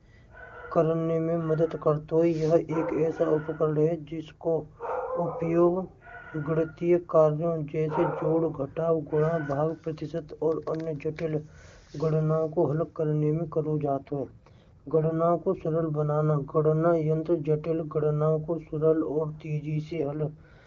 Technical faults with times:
13.86-15.12 AMR rate drop
19.93-20.66 AMR rate drop

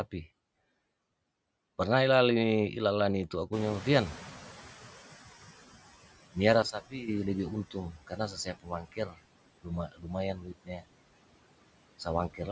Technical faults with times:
0.00-12.51 noise suppressor artifacts
3.52-5.75 noise suppressor catching up
6.62-7.08 sudden gain jump
7.92-9.22 speech cut by the noise suppressor
9.87-10.08 speech cut by the noise suppressor
10.35-10.86 speech cut by the noise suppressor
12.30-12.48 speech cut by the noise suppressor

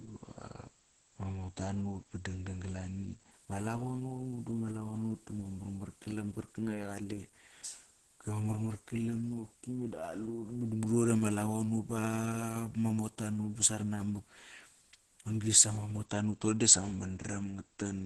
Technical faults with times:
0.00-18.06 Opus compression

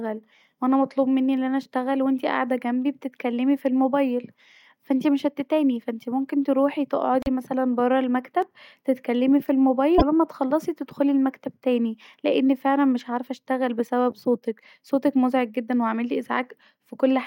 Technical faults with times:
7.21-7.28 broken MP3 bit reservoir
8.42 repeated buffer
9.97-10.03 broken MP3 bit reservoir

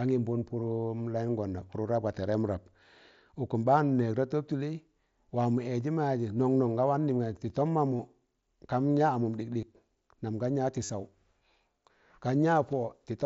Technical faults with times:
6.38 concealed Bluetooth headset packet loss
7.97 concealed Bluetooth headset packet loss
9.61 concealed Bluetooth headset packet loss
10.85-10.90 concealed Bluetooth headset packet loss

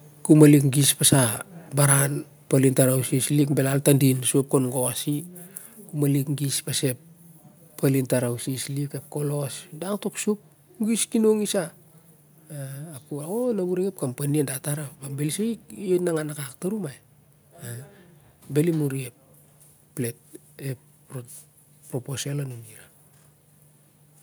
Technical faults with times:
0.31-0.45 microphone overload
0.44 microphone volume stepped down
4.20 microphone volume stepped down

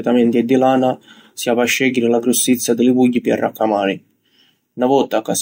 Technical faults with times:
none

